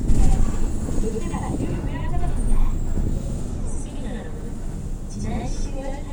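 One channel of this everyday-sound recording runs late by about 92.9 ms, which fits a 4096-sample buffer, and both channels are then summed to mono. The result is a channel delay (doubling): throughout the clip, every sound is followed by an equally loud second copy, heard as a distinct slap echo.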